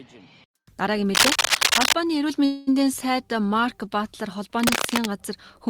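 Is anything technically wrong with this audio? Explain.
Yes. From 1.15 to 1.93 s, and again from 4.59 to 5.06 s, dense, uneven scratching and rustling bursts sit over the sound, first a little louder than it, then roughly level with it. This is cable scratch noise, likely from a worn cable, connector or control being moved.

From 2.45 to 2.69 s the last sound hangs on as a fading buzz or hiss without dropping to silence, then resumes exactly where it stopped, about 0.22 s late with nothing lost. This is a call audio freeze, likely delayed packets emptying the jitter buffer.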